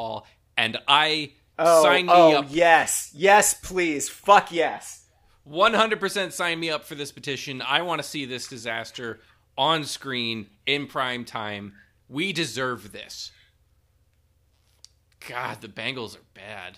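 Listening to the speech in this recording, nothing stood out as a technical problem at any point.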